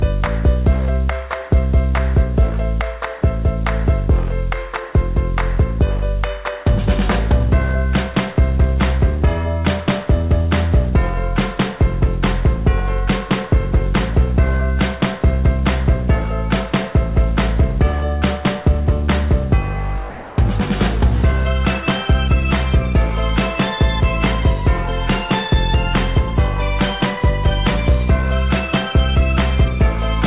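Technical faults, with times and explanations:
20.1 to 20.38 s, comfort noise in place of the background: for about 280 ms the real background, which sits about 19 dB below the loud parts, gives way to a smoother synthetic hiss about 1 dB quieter. The likely cause is discontinuous transmission, where the sender goes quiet during a pause and the receiver fills the gap with generated noise shaped roughly like the background. This is on a narrowband path with nothing above 4 kHz.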